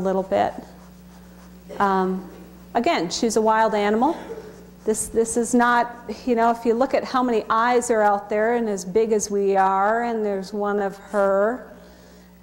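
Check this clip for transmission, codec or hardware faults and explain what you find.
One fault turns up, right at the tail end. From 9.30 s to 12.42 s there's a time-stretched section: the pace suddenly drops to about 0.68 times normal while the pitch holds. That's likely software lengthening the audio by repeating short slices, which makes it drag.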